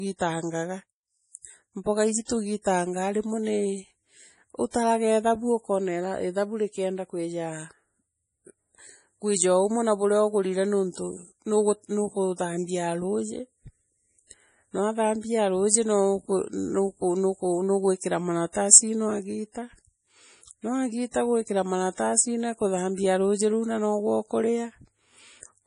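Speech with heavy, watery, swirling artefacts throughout, likely from MP3 compression at a very low bitrate around 32 kbps; unlike simple low-pass filtering, the damage flickers frame to frame. Pre-echo adds a short hiss just ahead of two attacks, at 2.25 to 2.29 s (40 ms) and 4.71 to 4.74 s (33 ms), leading into each onset rather than trailing it as reverb would.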